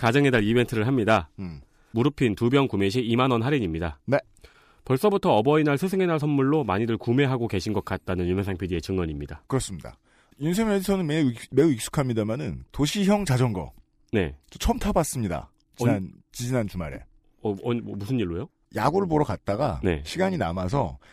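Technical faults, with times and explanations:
18.79 to 21.13 s, overlap-add ripple: the speech takes on a metallic buzz with extra tones around it as the level swings by about 6 dB around a hundred times a second. The frames were overlapped and summed with windows that do not add up to a constant gain, so each frame boundary dips or bumps the level.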